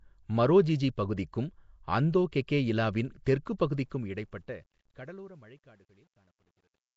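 Nellymoser compression runs through the whole speech clip, and the codec damage is plainly audible: a rough, hissy halo around the voice and a smeared, underwater character, with nothing above 7.7 kHz. The likely cause is Flash's Nellymoser Asao codec, which codes fixed blocks at a constant two bits per sample and fills bands it cannot afford with noise instead of the real signal. The sound fits a rate of about 32 kbps.

Truncation distortion on a fade begins at 3.72 s and lasts to the end at 6.97 s. As the level drops, the fade stage keeps too few bits and adds no dither, which fits a 10-bit path. The quietest part of the waveform collapses into a handful of square steps, so the falling tail turns grainy. This is worst from 4.91 s to 6.97 s, where the signal sits closest to the smallest step.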